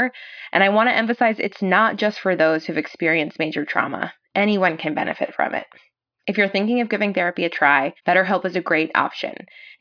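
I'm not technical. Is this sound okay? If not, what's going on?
Yes, nothing in this speech recording points to a technical problem.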